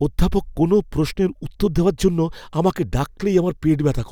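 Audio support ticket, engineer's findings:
No audible fault found in the speech recording. Nothing heard that points to any component in the chain.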